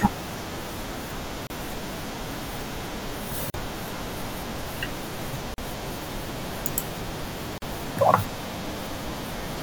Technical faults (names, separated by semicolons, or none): gap at a join of encoded pieces